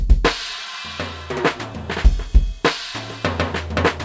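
Sounds; no technical faults can be heard here.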